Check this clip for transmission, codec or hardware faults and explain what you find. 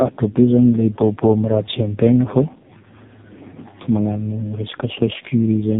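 One fault runs through the whole clip: tandem speech coding. The speech passed through a G.729A low-rate coder at 8 kbit/s, across a G.711 mu-law 64 kbit/s link, and was then re-encoded by AMR-NB at 5.9 kbit/s. The second speech coder modelled output the first had already degraded, so the errors stack. The speech sounds rough, muffled and warbly. On a spectrogram nothing appears above 3.8 kHz, and the harmonics look smeared and unsteady rather than cleanly striated.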